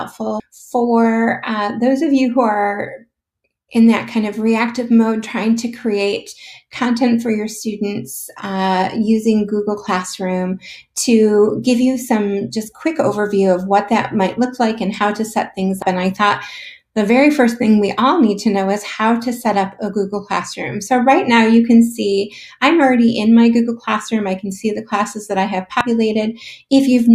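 At 0.40 s, 15.82 s and 25.81 s the stream carries damaged data in a compressed stream: corrupted bytes in those frames leave the decoder misreading them, losing sync and hunting for the next frame header. Each event is a brief chirp, squawk, click or short hole. On a spectrogram each shows as a thin vertical line or gap; the waveform shows a short jagged glitch and a discontinuity where playback resumes.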